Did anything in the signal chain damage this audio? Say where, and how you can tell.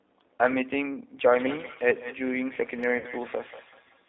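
Yes. At the codec stage, G.729 at 8 kbit/s runs throughout. The band stops near 300 Hz and 3.7 kHz, and the speech sounds plainly rough and synthetic.

At the network stage, a feedback echo between two devices starts at 1.24 s and lasts to the end. Each word returns roughly every fifth of a second, peaking about 16 dB below the speech.

Also at the network stage, VoIP packet loss concealed by the speech codec occurs from 2.98 to 3.07 s. The decoder papers over about 60 ms of missing audio, which fits two lost packets, with a stretched, fading sound.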